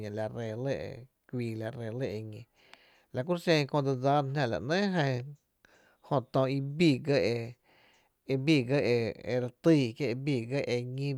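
No technical faults can be heard anywhere in the recording; the signal stays continuous and stable throughout.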